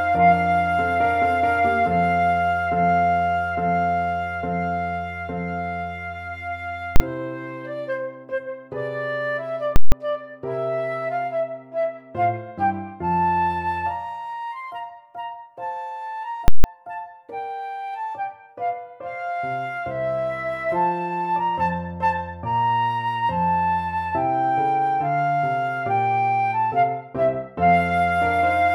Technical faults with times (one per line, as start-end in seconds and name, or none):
6.96-7.00 invalid numbers at full scale
9.76-9.92 invalid numbers at full scale
16.48-16.64 invalid numbers at full scale